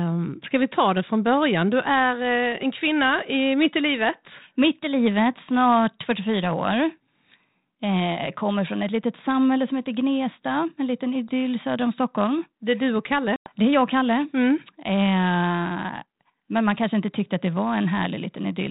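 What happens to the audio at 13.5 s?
Packet loss on an ADPCM call cuts a hard-edged silent hole from 13.36 to 13.50 s, about 100 ms, roughly ten packets. Unlike a plain dropout, the speech resumes with brief, slight distortion, because the decoder's predictor and step size must resynchronise.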